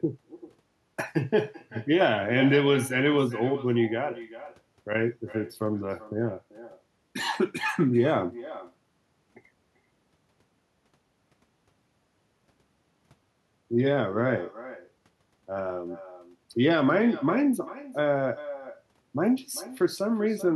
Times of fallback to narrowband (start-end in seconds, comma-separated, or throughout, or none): none